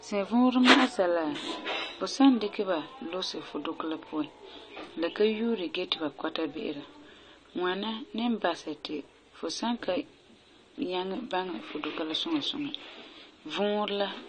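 The speech was likely squeezed through an AAC encoder starved of bits, with damage that fits AAC-LC at around 32 kbps. It lasts throughout. With so little data per frame, the encoder discards the upper spectrum entirely, leaving nothing above 9 kHz, and coarsely quantises what remains. The speech sounds dull and muffled, sibilants turn fizzy and smeared, and sustained vowels carry a plainly audible warbling texture where spectral detail drops in and out from frame to frame.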